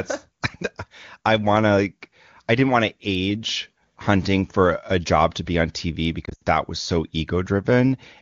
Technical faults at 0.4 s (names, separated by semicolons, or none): none